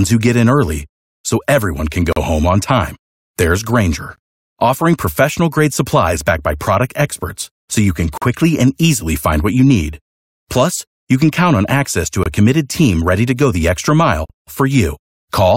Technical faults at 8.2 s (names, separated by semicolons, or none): gap between stream segments